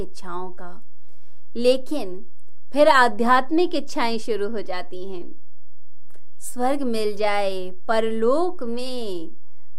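Nothing in the speech itself betrays the fault by ear, yet from start to finish the waveform sits displaced from zero, a DC offset of about -19 dBFS. That constant shift eats headroom and appears as steady energy at 0 Hz, beneath anything audible.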